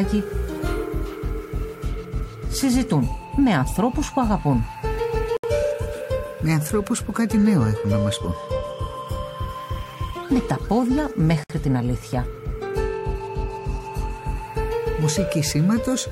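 Two brief dropouts break otherwise continuous sound: a gap of about 68 ms from 5.37 to 5.44 s, and another of about 60 ms from 11.44 to 11.50 s, each with smeared edges before the audio resumes exactly where it stopped. These are gaps at a join of encoded pieces, six seconds apart, which points to segments encoded separately and butted together untrimmed, leaving each encoder's start-up delay and final-frame padding in place.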